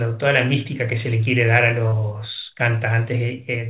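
At 1.88 to 1.94 s there's a short concealed packet loss: 40 ms never arrived, so the decoder stretched the preceding sound over it, leaving a quick smear.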